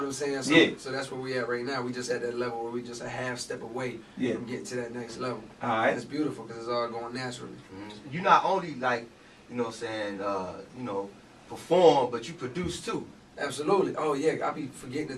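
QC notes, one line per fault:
No fault found.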